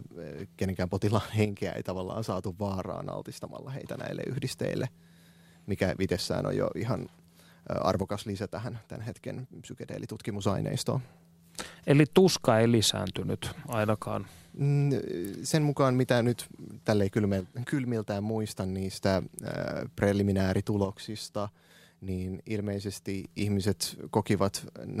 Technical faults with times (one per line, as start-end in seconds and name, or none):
1.45-3.85 one channel drops out
8.03-10.43 one channel drops out
17.40-19.03 one channel drops out
20.85-23.25 one channel drops out